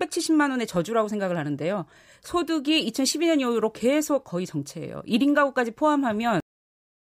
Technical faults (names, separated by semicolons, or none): cut-off end